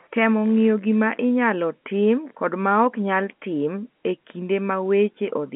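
No faults detected; the speech carries the expected G.711 A-law telephone character, confined to the 200 Hz to 3.4 kHz line band with nothing above 3.8 kHz.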